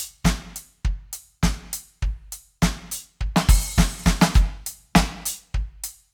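No technical faults are audible.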